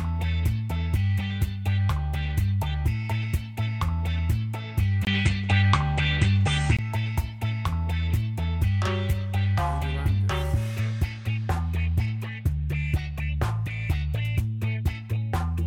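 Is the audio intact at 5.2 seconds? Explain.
No. From 5.05 to 6.79 s the sound goes dull and narrow, with nothing above 8.9 kHz. A 20 ms gap comes first. The level shifts by around 5 dB, with faint new noise. The likely cause is an input switched to a poorer device.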